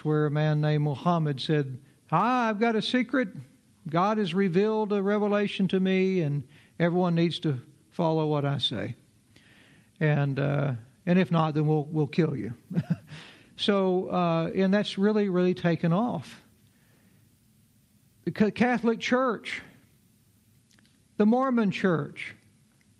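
Nothing stood out on listening, with the top end stopping at around 12 kHz in the way expected of an Opus call path at 48 kbps.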